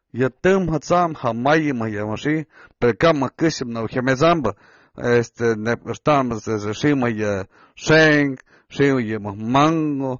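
AAC compression affects this speech clip throughout. Nothing reaches above 6.9 kHz, and the sound is audibly dull and smeared, likely from AAC-LC quantising coarsely at a low bitrate that fits about 24 kbps.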